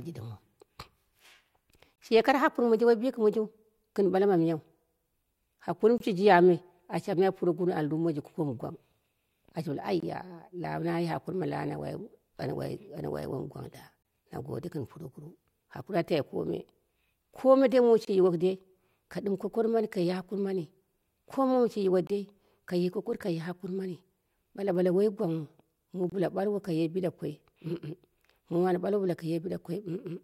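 A gap between chunks interrupts the speech every 4 s: at 1.96 s before "shiye koro", 5.98, 10.00, 14.03 before "na gode", 18.05, 22.07 after "sai yiwo", and 26.10 s. Each hole lasts about 23 ms.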